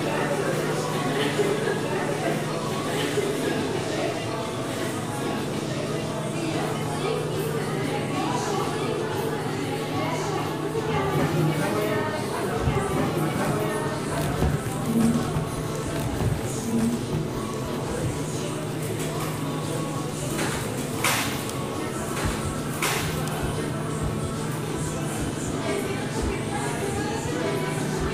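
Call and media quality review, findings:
Doubled audio track, throughout. Every sound repeats about two seconds later at roughly equal level, full-band, with no decay or room colour. Likely a second capture path running late, or an edit stacking two copies out of step.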